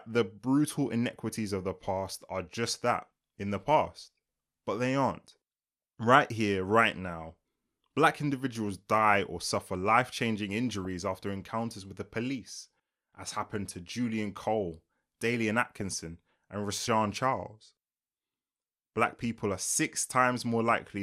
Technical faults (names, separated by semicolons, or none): DAB burbling